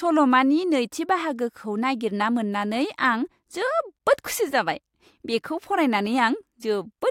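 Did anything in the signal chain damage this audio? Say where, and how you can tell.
No, nothing in the chain from capture to playback left an audible mark on this speech.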